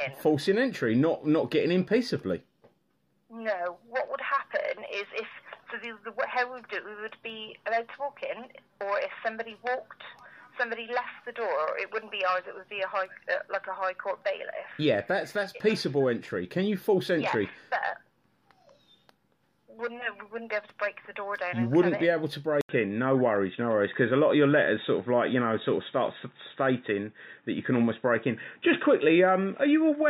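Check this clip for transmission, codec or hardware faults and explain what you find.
One fault appears, from 22.61 s to the end: the input was likely switched to a poorer device. After an 80 ms silence, nothing passes above 3.8 kHz, the level shifts by about 5 dB, and a new noise floor sits roughly 50 dB down. That gap, level step and fresh noise set it apart from a simple bandwidth drop.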